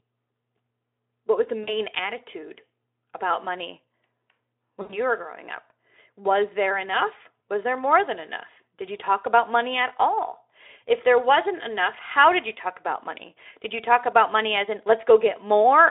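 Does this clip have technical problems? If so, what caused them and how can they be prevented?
Yes. At 1.63 to 1.74 s, between "what was the" and "attitude about money", and again at 4.81 to 4.99 s, just before "were growing up", the speech briefly smears into a buzzy tone or coloured noise that fades, and comes back weak or distorted. This is VoIP packet loss concealed by the speech codec. Audio packets went missing, so the decoder stretched its last pitch and spectral shape while turning the level down. The gaps sound like about two lost 20 ms frames and about four. The narrowband Speex line itself can be heard throughout. To prevent it, use a wired or less congested network, and give the call a larger jitter buffer or forward error correction.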